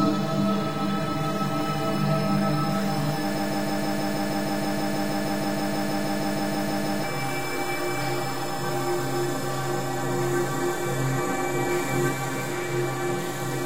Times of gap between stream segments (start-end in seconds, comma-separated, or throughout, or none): none